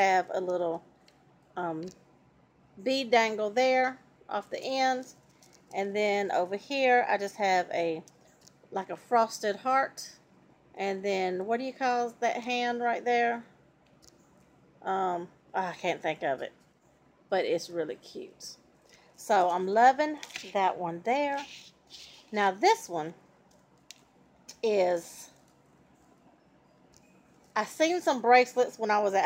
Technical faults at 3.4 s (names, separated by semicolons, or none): imaging from linear upsampling